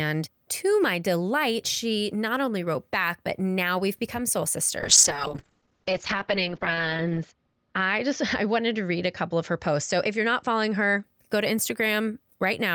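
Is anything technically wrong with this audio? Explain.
Yes. From 4.81 s, just after "now we've become soul", to 11.09 s, before "go to", there is a call bitrate drop. The call's bandwidth estimate fell, so the encoder coded far more coarsely. The detail drops, consistent with a fall from about 48 to 11 kbps, and the top of the spectrum is cut from 20 kHz to 8 kHz. The speech sounds muffled and rough, worst for about 2.2 s. Unlike packet loss, the sound never breaks up or gaps. It stays continuous but degraded until the bitrate recovers.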